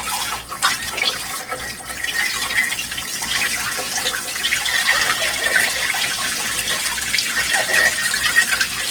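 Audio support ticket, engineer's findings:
Grainy, rough, noisy texture throughout, with less swirl than MP3; full bandwidth to about 20.3 kHz. Likely Opus compression, CELT mode, noise-filling starved bands, pointing to roughly 16 kbps.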